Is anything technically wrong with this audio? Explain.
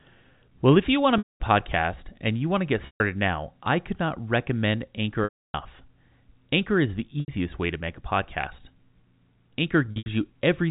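Yes, there is packet loss with pitch repetition at 1.18–1.4 s, 2.86–3.0 s, 5.24–5.54 s, 7.2–7.28 s and 9.86–10.06 s, the last scattered over 200 ms. The receiver loops the last pitch period across each gap, giving a held, buzzy tone that fades to silence in longer gaps, such as the 300 ms one. This happens over the telephone-band G.711 coding.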